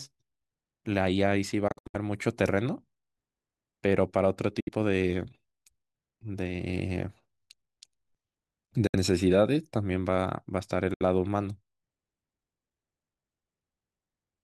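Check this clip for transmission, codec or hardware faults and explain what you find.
Four short gaps cut through the speech, consistent with a Bluetooth dropout: at 1.68 to 1.95 s (broken holes, longest about 64 ms), then 4.60, 8.87 and 10.94 s (about 64 ms each). Packets likely arrived too late and were discarded, leaving silences before the speech resumes further on.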